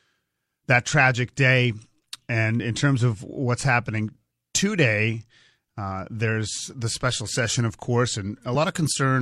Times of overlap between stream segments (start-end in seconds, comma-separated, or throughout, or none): 2.60-2.63